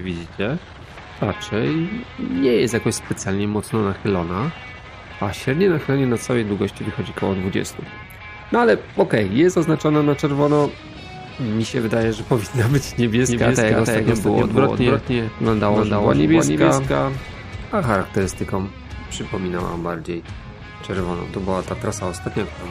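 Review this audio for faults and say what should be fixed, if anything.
Doubled audio track, 13.2 to 18.0 s: a second full-band copy trails about a third of a second behind, roughly 5 dB quieter, likely from a duplicate capture path. Make sure only one capture path feeds the mix, and remove or mute the stray out-of-step copy in the edit.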